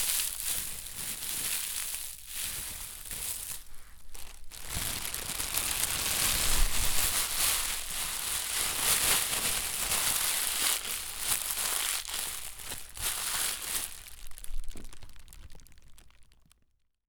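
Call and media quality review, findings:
No audible faults found on the everyday-sound recording; no action needed.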